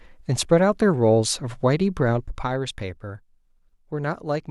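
No technical faults can be heard in this speech recording.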